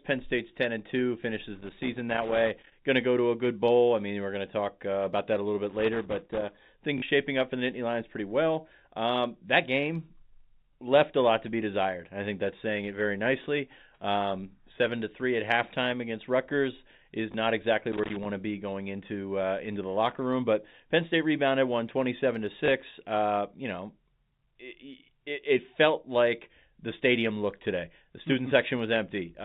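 A worn or dirty contact in the line is making and breaking as it moves, producing loose connector crackle: the signal is chopped and any DC on the line adds pops. It is heard as irregular scratchy bursts from 1.55 to 2.72 s, again from 5.69 to 6.58 s just after "that a little bit", and briefly from 17.92 to 18.25 s.

Packets are going missing and the receiver fills each gap by replaying the last packet it has, which is packet loss with last packet repeated. At 6.98 to 7.02 s, 40 ms is lost, which fits two 20 ms packets, so the fill buzzes briefly as a robotic stutter. Shorter 20 ms repeats fall at 17.32 s, just before "not exactly", and at 22.66 s, right after "rebounded twenty seven to". Under all of this, the band is capped at 4 kHz by the G.711 telephone coding.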